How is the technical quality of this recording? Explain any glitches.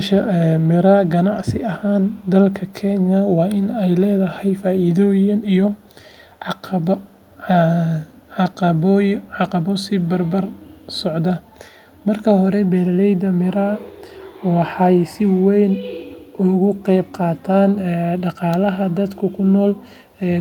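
The recording has a recurring echo leak: a faint, delayed copy of the speech at 0.6–1.09, 2.01–2.73, 4.55–7.38, 8.05–8.55, 9.22–10.81 and 11.44–11.55 s. It trails by 200 ms at around 35 to 40 dB below the speech. It likely comes from a loudspeaker's sound leaking past an echo canceller. It is a distinct repeat rather than the smooth tail of room reverb.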